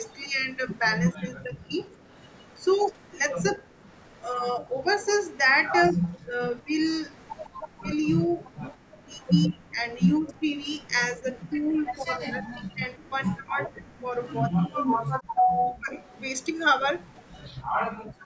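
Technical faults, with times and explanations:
0.08–11.9 s and 15.36–17.38 s, echo leak: a faint copy trailing about 158 ms behind, roughly 25–30 dB down, likely residual loudspeaker pickup the canceller missed.
1.14–15.93 s, speech suppressed in double talk: about 4 s in total of the voice dipping by up to roughly 30 dB, likely the canceller attenuating the talker alongside the echo.
2.01 s, 7.5–9.04 s and 17.63–18.25 s, background gated by the echo canceller: room sound drops by about 10 dB, then about 40 dB, as the canceller clamps the microphone during loudspeaker playback.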